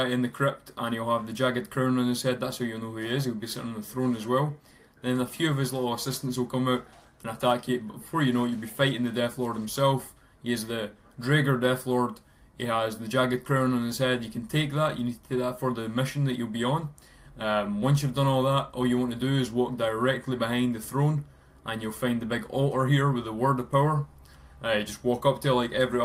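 No technical faults can be heard anywhere in this clip.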